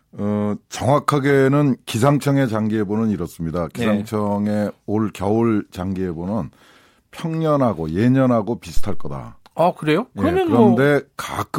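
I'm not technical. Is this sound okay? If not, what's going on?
No. Around 8.77 to 9.25 s, microphone power was switched on or off on a live input, causing a phantom power thump: a loud, deep bump that dies away within about a tenth of a second.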